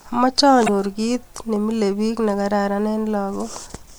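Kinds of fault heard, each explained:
Damaged data in a compressed stream: from 0.64 to 0.69 s, about 40 ms of the speech is disrupted. Corrupted bytes in the encoded stream left the decoder unable to read those frames correctly, so it lost sync until it found a valid frame header again. A plain dropout would leave silence, and a click would be a single instant tick.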